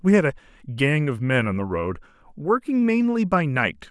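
Nothing in this speech recording stood out as a technical problem on listening.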